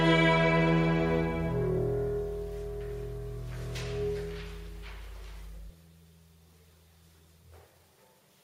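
From 0 to 5.7 s there is mains hum, a steady 50 Hz tone roughly 15 dB below the signal, as power-line energy leaks in through a ground loop or nearby transformer.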